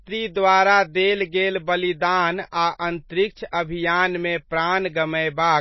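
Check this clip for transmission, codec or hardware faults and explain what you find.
Two kinds of fault are present: codec damage across the whole speech clip, and two brief pre-echoes.

Throughout, the sound is dull and watery, with nothing above 5.8 kHz. This is likely MP3 compression at a very low bitrate, around 24 kbps. Short of bits, the encoder cuts the treble at a fixed point and drops weak frequency lines, which flicker on and off between frames. That gives the swirly texture and softened sibilants. A spectrogram would show a hard ceiling at 5.8 kHz and patchy, blocky holes below it.

Pre-echo occurs at 2.51 s and 3.51 s, spreading about 13 ms and 16 ms before each attack. A sharp onset landed late in a transform block, so quantisation noise sized for the loud part also filled the quiet stretch ahead of it. You hear a short hiss just before the attack, which itself sounds smeared. 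On the waveform, low-level noise appears before the transient, and a spectrogram shows a thin broadband smudge leading each onset.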